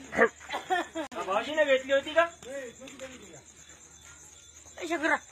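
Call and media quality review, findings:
Gap at a join of encoded pieces, 1.07 to 1.12 s. A silence of 47.5 ms cuts into continuous sound. Probable component is the segment concatenation after encoding. The edges are smeared by the codec. Sound resumes where it stopped, so nothing is lost. Mechanism: pieces were encoded separately and joined untrimmed. The encoder's start-up delay and the padded final frame both remain as dead air at the seam.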